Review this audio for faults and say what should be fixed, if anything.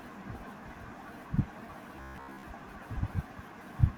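From 1.97 to 2.46 s the speech turns into a rigid, metallic buzz at about 66.8 Hz: robotic sound from repeated short buffers. A 15 ms segment is likely being looped while most real audio is skipped. Deeper jitter buffering or faster audio delivery prevents this.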